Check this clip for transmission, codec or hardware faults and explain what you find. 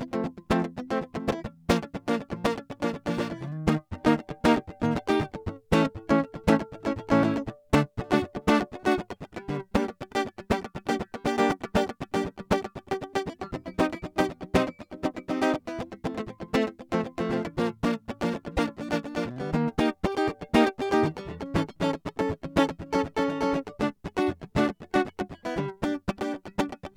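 Two brief faults stand out in this music clip, both of the same kind.

Damaged data in a compressed stream, at 1.27 to 1.32 s and 18.54 to 18.59 s: corrupted bytes made the decoder misread frames and lose sync until it found the next frame header, producing a short chirp, squawk, click or hole lasting about 50 ms each time.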